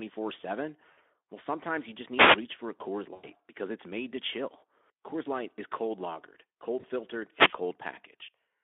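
Speech carried over a narrowband Speex voice link, with its 250 Hz to 3.5 kHz line band, is broken up by two kinds of fault. VoIP packet loss concealed by the speech codec occurs at 0.91 to 0.98 s, 3.13 to 3.27 s and 6.79 to 6.86 s. At each point the decoder stretches the last pitch and spectral shape into a fading buzzy tone or coloured noise. The gaps sound like about 60, 100 and 40 ms of missing audio, which fits runs of lost 20 ms frames. The voice stays weakened briefly after each gap. Wireless microphone noise hits occur at 2.14 to 2.39 s and 7.30 to 7.60 s, swishes of static of about 0.25 and 0.29 s. These are caused by the analogue FM radio link fading as reflections cancel, which lets receiver noise rise over the signal.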